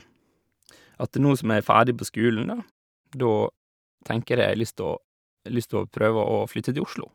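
Nothing in this speech clip stands out as a technical fault; it just runs along without any trouble to point to.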